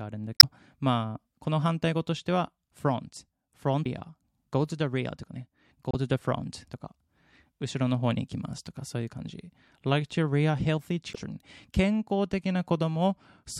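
Damaged data in the compressed stream throws the decoder out of sync, giving brief glitches: 0.35–0.44 s after "あるんだ", 3.82–3.86 s after "し て は front", 5.91–5.95 s, and 11.11–11.15 s after "like to rear healthy".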